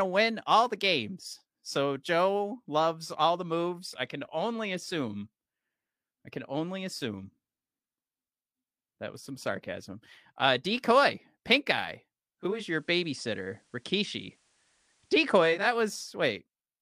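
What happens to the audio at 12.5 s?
Right after "decoy pink eye", from 12.37 to 15.77 s, the digital radio is blending to analogue FM: a 414 ms cross-fade brings faint hiss.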